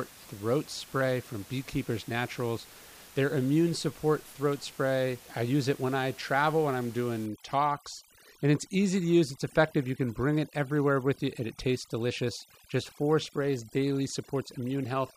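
From 7.26 s, just after "I travel when I'm", overdone noise removal sets in and lasts to the end. A noise reduction stage is working far too hard. The room noise, about 23 dB below the speech, is an easy target. Bands near the noise estimate get pulled down or shut off. Quieter parts of the speech fall below that line and vanish too. The background drops, dotted with twinkling specks.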